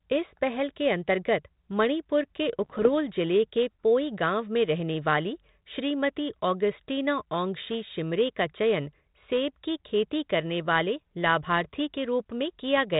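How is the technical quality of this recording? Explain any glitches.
The recording is telephone-band speech, with the band-limited, lightly grainy texture of 32 kbit/s G.726 ADPCM. One glitch stands out.

From 2.59 to 2.88 s, between "के अंतर्गत मणिपुर के" and "जिले के पोई", there are bit errors on an ADPCM link. A few bits in the coded stream arrive flipped, roughly a few in a thousand. Each bad bit throws off the decoder's step size and predictor, and the error keeps ringing for several milliseconds. You hear pops and rough, gritty bursts, with the level briefly jumping and dipping.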